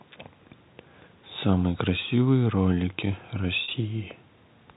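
At 3.64 to 3.68 s, packet loss with pitch repetition fills a 40 ms gap by repeating the last pitch period. It sounds like a brief buzzy hold rather than a silent dropout.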